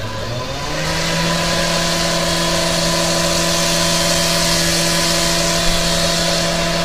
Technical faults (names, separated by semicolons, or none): low-delay AAC compression